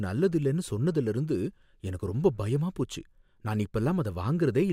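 A speech recording, and nothing is technically wrong with it.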